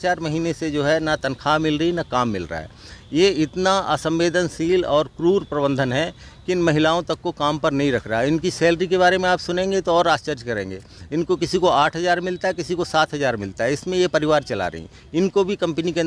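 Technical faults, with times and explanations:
Nothing technical stands out here; everything comes through just fine.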